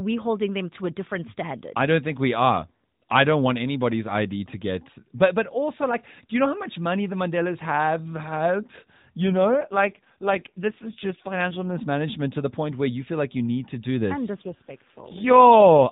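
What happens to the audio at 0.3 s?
Nothing goes wrong at 0.3 s: the speech continues intact through the narrowband AMR mobile codec path, with nothing above 4 kHz and only the light coding colour expected at 12.2 kbps.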